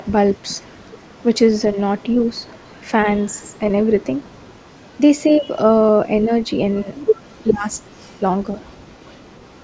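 From 0.31 to 0.56 s a faint delayed copy of the speech appears about 400 ms behind the original, some 25 dB down. This is an echo leak, likely from a loudspeaker on the far end whose echo canceller let part of its microphone pickup pass back. Shorter, weaker scraps follow at 2.02–2.25 s and 3.31–3.50 s, around 35 dB down. A longer stretch runs from 4.03 to 5.38 s, about 30 dB down, with the same 400 ms lag.

At 5.39–5.46 s the speech dips by up to about 10 dB for roughly 70 ms. This is speech suppressed in double talk, likely the echo canceller mistaking the talker for echo while both sides overlap and turning everything down. A second episode falls within 6.25–6.89 s, totalling around 100 ms, and a third at 7.51–7.67 s lasts about 150 ms. Each time the speech briefly drops, up to about 10 dB.

From 6.42 s to the end at 9.63 s the echo leak returns continuously, about 30 dB down and trailing by 400 ms, overlapping the later suppression dips.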